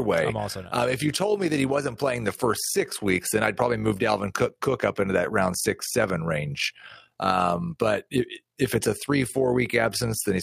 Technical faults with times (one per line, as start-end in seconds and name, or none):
0.00-10.42 overlap-add ripple